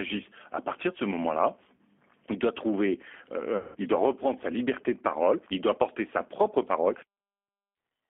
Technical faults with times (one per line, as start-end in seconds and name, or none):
0.00-8.10 G.729 codec
1.76-1.81 VoIP packet loss concealed by the speech codec
3.57-3.77 VoIP packet loss concealed by the speech codec